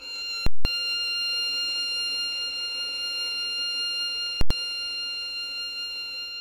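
A loud pop at 0.46 s, silence for about 186 ms, then another pop at 0.65 s; the same happens from 4.41 to 4.51 s over about 93 ms. These are invalid numbers at full scale: infinite or invalid results pinned the music to maximum output, which fits blocks of 8192 and 4096 samples.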